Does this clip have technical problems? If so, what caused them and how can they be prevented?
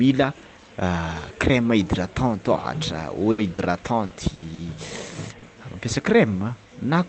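Yes. The speech went over a call path with an 8 kHz audio bandwidth cut-off, and the problems all come from packets arriving late or not at all.

Short stall from a late packet, 3.31 to 3.41 s: the jitter buffer ran empty, so the receiver stretched the last sound for 70 ms and then resumed from the same point. Nothing is lost, but that sound is held too long, and playout delay rises by 70 ms. A jitter buffer with a little more headroom would absorb that late arrival.

Short concealed packet loss at 3.54, 4.06, 4.54 and 5.38 s: each time, 40 ms of audio never reached the decoder. The receiver continued the preceding sound across the gap and blended back in, which is heard as a brief smear or wobble where a short consonant may vanish. In-band forward error correction or redundant packets would recover these single losses.

Burst of packet loss, 4.34 to 4.45 s: about 80 ms was filled by continuing the last sound while fading it, heard as a held buzz or fading hiss. 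40 ms of real audio is skipped, and delay grows by 40 ms. Reducing network congestion or adding redundancy spread across several packets would prevent bursts like this.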